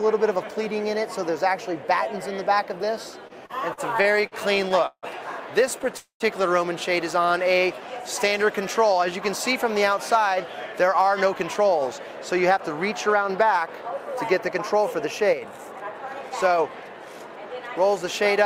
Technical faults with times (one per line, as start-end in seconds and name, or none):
3.27-5.06 repeated stalls (stutter)
5.97-6.23 call audio freeze
7.26-8.44 jitter buffer slow-down
10.18-17.06 jitter buffer speed-up